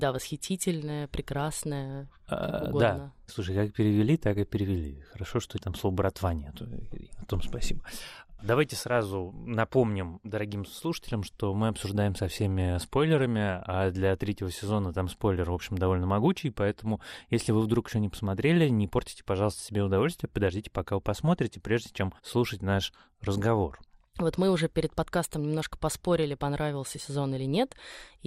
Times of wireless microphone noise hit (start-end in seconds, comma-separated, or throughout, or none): none